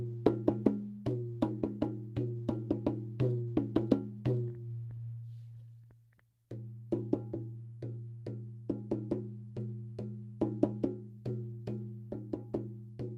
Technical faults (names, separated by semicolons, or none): none